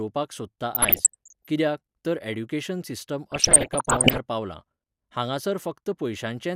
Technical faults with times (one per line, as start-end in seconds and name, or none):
0.75-1.47 DAB burbling
3.32-4.18 DAB burbling